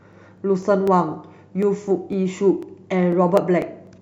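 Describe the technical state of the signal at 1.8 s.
At 1.8 s the speech carries a regular tick, one of a steady series repeating every 0.249 s, about four per second, from 0.13 s to 3.87 s. These are periodic USB or driver dropouts: something stalls the USB link or audio driver at a fixed interval, and each time a tiny slice of signal, around half a millisecond, is skipped outright. The abrupt splice in the waveform produces the click, heard only where there is sound.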